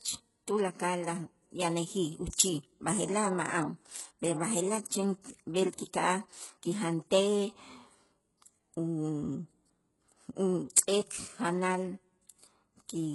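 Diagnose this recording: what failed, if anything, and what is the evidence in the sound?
The codec stage is at fault throughout. The speech has heavy coding damage: s sounds and other treble come out gritty and metallic, and there is nothing at all above 11.5 kHz. This is likely HE-AAC compression at a very low bitrate, which fits something around 12 kbps. The treble is rebuilt by spectral band replication from copied lower bands rather than coded directly, so its harmonics don't line up with the band below. A plain low-pass codec would sound dull instead of bright and false.

There is also pre-echo, a codec-stage fault, at 2.32 s, just before "b'aje'laj ma'an". A brief hiss of about 10 ms runs ahead of the attack, which sounds softened. The transform block spread quantisation noise sized for the loud onset back across the quiet moment before it. Unlike a click or a dropout, it is a smear of noise tied to the attack and leading into it, not a sharp isolated event.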